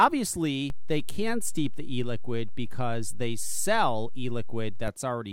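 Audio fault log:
0.70–4.88 s, DC step: the waveform's zero line jumps by about -25 dBFS at 0.70 s, holds, then returns at 4.88 s. Each sudden shift is heard as a low thump, while the speech on top continues unchanged between them.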